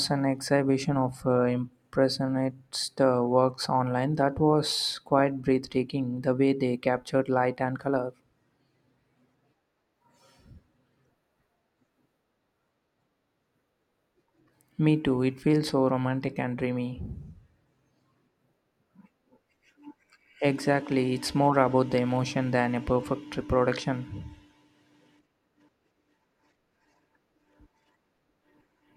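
A spoken-word recording, and there's nothing technically wrong to point to anywhere in it.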